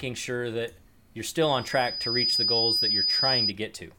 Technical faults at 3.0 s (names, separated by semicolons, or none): loudspeaker feedback squeal